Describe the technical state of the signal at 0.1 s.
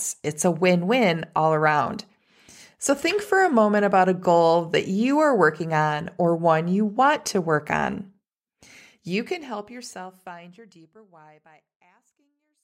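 At 0.1 s the speech signal is intact, with no technical fault present at that moment.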